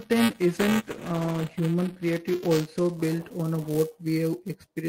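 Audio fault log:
throughout: buffer tearing. A steady robotic buzz at 345 Hz rides on the speech and drops out in silences. Writer and playback pointers cross inside each period, which fits a 128-sample buffer, so a small slice of each holds audio roughly 5 ms stale, with hard joins.
0.54 to 1.63 s: call bitrate drop. The speech turns rough and watery and loses its top end, then clears just before "creative also built on". The bandwidth estimate fell, cutting the encoder from 32 to 15 kbps, coarser coding that held for about 1.03 s.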